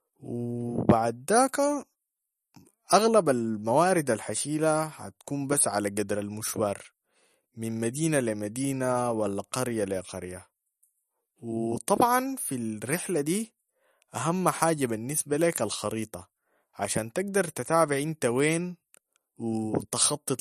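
Speech throughout shows what is likely MP3 compression at a low rate, consistent with around 44 kbps: the encoder has dropped everything above 13.6 kHz and starved weak frequency lines, so the whole clip sounds dull at the top, with plainly audible watery swirl and smeared consonant attacks.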